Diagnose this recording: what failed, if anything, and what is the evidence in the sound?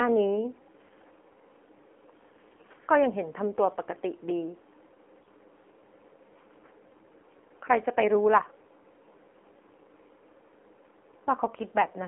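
AMR narrowband mobile codec, throughout the speech. This is a codec-stage fault. The sound is held to a telephone band of about 250 Hz to 3.4 kHz, with nothing above 4 kHz. The voice has a plainly audible buzzy, synthetic quality, which fits one of AMR-NB's lower modes, around 7.4 kbps. At that rate the encoder models the vocal tract and excites it with only a few pulses per 5 ms subframe, so natural detail is replaced by a coarse approximation.

AMR bit errors occur at 2.52–2.69 s, 5.22–5.30 s and 8.42–8.62 s. These point to the network stage. In each burst the voice keeps roughly its pitch and level but turns hoarse, scratchy and gargly for a run of frames. The link was corrupting a few percent of bits in the weakly protected part of each frame, while the checksum over the critical bits still passed. As a result, the decoder placed excitation pulses wrongly and applied slightly wrong gain and spectral values.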